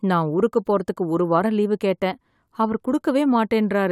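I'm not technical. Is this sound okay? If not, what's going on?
Yes, there's nothing technically wrong to hear in this short speech recording.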